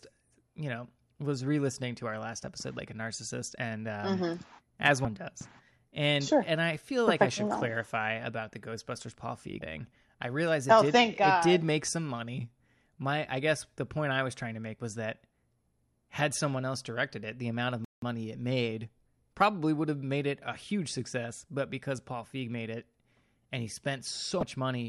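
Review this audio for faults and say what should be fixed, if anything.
Damaged data in a compressed stream shows up three times as brief glitches, at 5.02–5.05 s, 9.59–9.62 s (just before "I realize it oh") and 24.40–24.43 s. Each burst lasts about 33 ms while the decoder misreads corrupted frames and hunts for the next valid header. On a spectrogram each appears as a thin vertical disturbance; the waveform shows a short, jagged discontinuity. Checksummed transport with retransmission or error-resilient framing would prevent this.

A playback stall cuts the speech from 17.85 to 18.02 s, between "it the amount of" and "money it made probably," leaving about 177 ms of silence before it resumes where it stopped. This is likely buffer underrun or a blocked playback thread. The waveform drops to a flat line and the spectrogram shows a clean vertical gap. A larger playback buffer and a non-blocking audio thread would prevent it.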